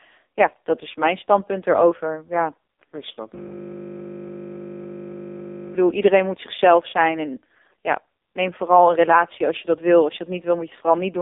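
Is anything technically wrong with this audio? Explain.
Yes. The whole clip has been through an AMR narrowband mobile codec with heavy damage. Its 8 kHz sampling leaves nothing above 3.8 kHz, and the line band runs roughly 250 Hz to 3.7 kHz. The speech is rebuilt from a vocal-tract model driven by sparse pulses, and the buzzy, synthetic quality fits a very low mode around 5 kbps. On a spectrogram, energy stops flat near 3.8 kHz and the low end is thin below 250 Hz.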